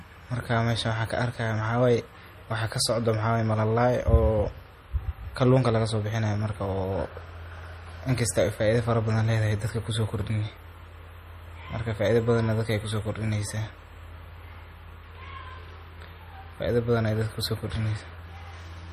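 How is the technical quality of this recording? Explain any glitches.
The quality is compromised by audible codec damage throughout the speech. From start to finish there is plainly audible compression damage, likely MP3 compression at a low bitrate, around 40 kbps. Nothing remains above 15.2 kHz. Short of bits, the encoder cut the treble and dropped weak frequency lines. These lines flicker between frames, giving a watery, swirly texture.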